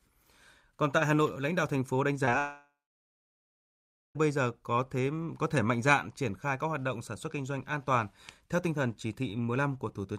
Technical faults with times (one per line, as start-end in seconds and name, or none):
2.25-2.29 short concealed packet loss
2.39-4.17 long network dropout